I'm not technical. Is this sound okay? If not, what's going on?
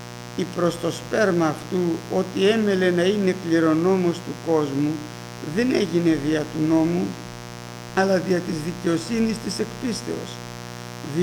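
No. A mains buzz runs through the whole clip: a steady, raspy hum from 60 Hz electrical interference, fairly loud compared with the wanted sound.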